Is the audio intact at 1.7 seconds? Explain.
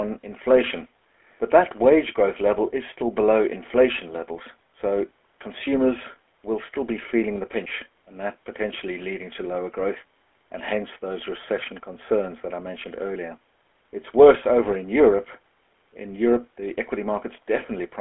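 No, the GSM full-rate codec affects the whole clip, 1.7 s included: regular-pulse excitation adds gravelly buzz, fitting 13 kbps, and a spectrogram shows nothing above about 3.4 kHz.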